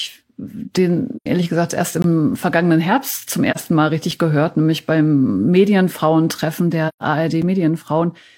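Speech, carrying two kinds of fault. In AAC frame loss with muting, the decoder zeroed missing frames, so the sound fades out and back in at 1.16–1.26 s, 3.51–3.58 s and 6.88–7.03 s, lasting about 85, 43 and 128 ms. The block of digital silence comes from samples replaced by zeros, making abrupt dropouts at 2.02–2.04 s (20 ms) and at 4.11 s and 7.42 s (5 ms each, consistent with 256-sample blocks).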